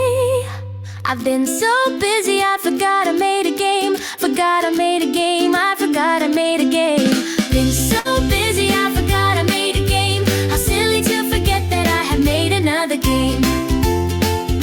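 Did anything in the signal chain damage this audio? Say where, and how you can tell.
Yes. At the network stage, a burst of packet loss hit from 7.99 to 8.08 s. Consecutive packets arrived too late or not at all, so the receiver extended the last sound for 53 ms, fading it down, then resumed with 60 ms of audio skipped.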